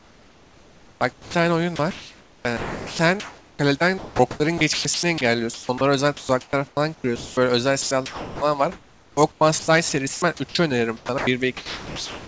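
From 0.0 to 12.3 s the speech keeps cutting in and out, with about 6.2 s swapped for flat hiss. That's likely sound chopped by the voice detector, with comfort noise filling the gaps.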